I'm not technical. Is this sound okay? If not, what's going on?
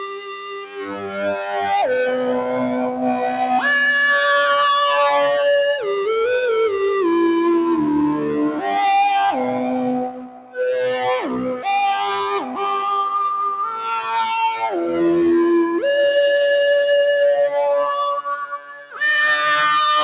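No, not quite. A noise suppressor meant for speech was left on, so the whole clip has a noise suppressor applied to music or sounds. It mistakes steady tones and lingering tails for background noise and keeps turning them down, so the level pumps and thins throughout.

You can hear the sound cut by the noise suppressor most clearly at 0.0 to 1.6 s, 10.04 to 10.6 s, 11.21 to 11.67 s, 12.39 to 12.61 s, 13.7 to 14.14 s and 18.42 to 19.01 s. Held or fading parts sink there, and the dips at 10.04 and 18.42 s are the deepest.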